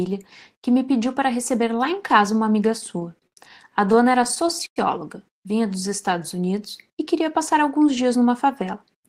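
At 3.27 s a short stall from a late packet interrupts the speech. A packet missed its playout time, the jitter buffer emptied, and the receiver held the last sound for about 50 ms until the data arrived, then carried on from the same point, so nothing is lost and playback runs 50 ms later afterward. It is heard as a brief smeared hold. On a spectrogram the harmonics run flat and unchanging across that stretch, and the waveform shows a repeating, slightly decaying cycle in place of the normal variation.

From 3.74 s to 4.78 s the audio turns into repeated stalls (stutter). Packets kept reaching the receiver late, so the buffer ran dry eight times and each gap was bridged by extending the preceding sound. About 168 ms in total, roughly 16 % of that second, is filled this way, with the longest hold lasting 101 ms and fading toward silence. Nothing is missing, but the speech drags and hiccups. 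A spectrogram shows eight frozen, smeared bands breaking the normal flow, and the waveform shows looped segments, the longest tapering in level.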